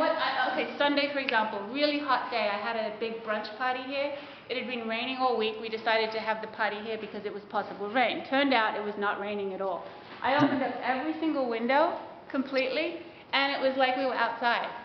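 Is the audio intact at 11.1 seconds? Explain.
Yes, the audio is intact at 11.1 seconds, with no fault audible at that moment.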